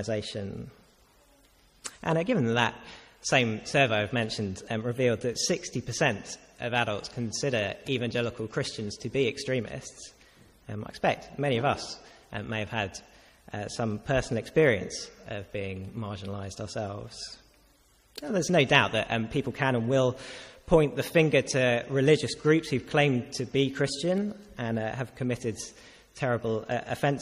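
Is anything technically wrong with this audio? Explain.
Yes. Throughout the clip, a gritty, inharmonic fizz rides on the louder and brighter passages, sitting about 30 dB below the sound. This is crude rate conversion. The pattern points to a jump from 32 kHz to 44.1 kHz by simple linear interpolation with no filter, so a repeating error adds shifted, inharmonic copies of the audio.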